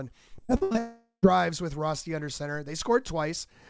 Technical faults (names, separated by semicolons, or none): repeated packet loss (robotic sound); long network dropout